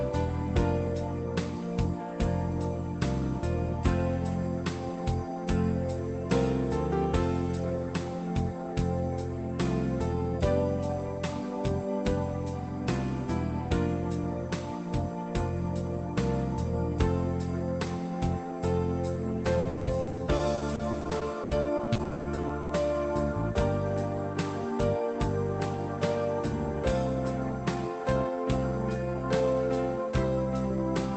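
From about 19.59 s to 22.71 s there's a stretch of repeated packet loss, and it gives that robotic sound. The audio keeps dropping out in short holes, the longest around 80 ms, and each one gets patched by stretching the last bit of sound. About a third of that three-second window is concealment rather than real audio, so it comes across choppy, with pieces missing, over the call path's already band-limited sound, which tops out around 8 kHz.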